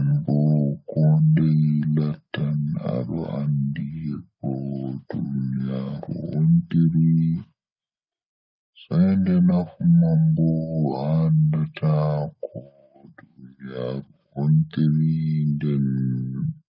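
Throughout, the speech runs at about 0.73 times normal speed and roughly 5.5 semitones low. This is a wrong sample rate fault, consistent with audio recorded near 22 kHz being played at 16 kHz without conversion. It sounds deep and sluggish, and a spectrogram shows every harmonic shifted proportionally down, with syllables stretched.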